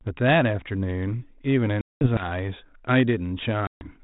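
Packet loss on an ADPCM call drops about twenty packets at 1.81 s (200 ms) and around fifteen at 3.67 s (140 ms). The decoder's predictor and step size lose sync, so after each hard-edged silence, sound returns at 2.27 s and 3.83 s slightly distorted, settling within tens of milliseconds.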